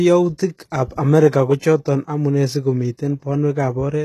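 From start to end, the speech carries a plainly audible coding artefact, likely from HE-AAC compression. Nothing sounds above 12.3 kHz. The upper band is not the original treble. It is rebuilt by copying lower bands upward and shaping them roughly. So harmonics do not line up across the crossover. Sibilants turn gritty and lispy, with a metallic edge. The damage fits a very low bitrate, around 16 kbps.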